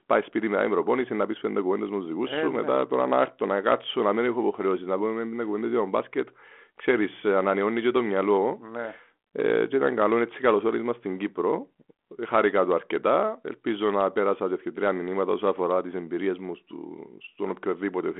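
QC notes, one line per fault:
No faults to log in these QC notes.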